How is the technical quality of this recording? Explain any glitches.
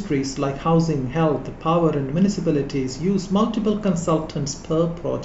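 Listening through the recording, nothing stood out as a technical problem, so there are no glitches to explain.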